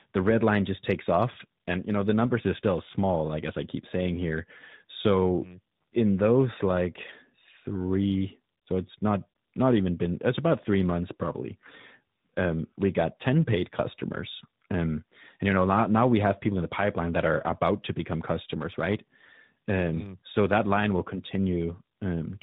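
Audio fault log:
Throughout: tandem speech coding. The speech is rough, muffled and warbly, with nothing above 3.8 kHz. The sound fits two speech codecs in a row, the second recoding the first's degraded output.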